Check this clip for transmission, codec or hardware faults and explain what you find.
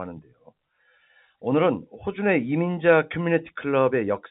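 Nothing here points to a transmission, codec or hardware problem; the speech simply carries the narrow telephone band of G.711 coding, with nothing above 4 kHz and only the faint level-following hiss that the format always brings.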